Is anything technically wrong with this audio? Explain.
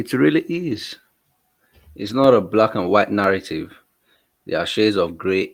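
Yes. At 0.51–0.77 s and 2.01–2.19 s, there are lost packets rebuilt from error correction. Low-bitrate backup copies fill the gaps, so the sound turns briefly rough and noisy with no dropout.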